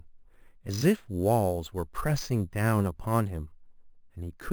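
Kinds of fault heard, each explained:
Imaging from sample-and-hold upsampling: samples were repeated with no smoothing filter, leaving mirrored copies of the speech spectrum. The lowest spans 5.5 to 11 kHz at about -20 dB, heard as a metallic fizz following the speech, which fits an 11 kHz source raised to 48 kHz.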